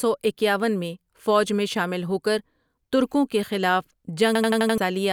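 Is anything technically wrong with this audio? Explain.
Yes. From 4.35 to 4.78 s, after "ہوکر ترکوں کے خلاف", there is a system hang loop. The system froze, so the hardware replayed one 85 ms buffer five times, which fits a 4096-sample buffer. The result is a rapid 11.7 Hz stutter, and around 0.4 s of speech is lost.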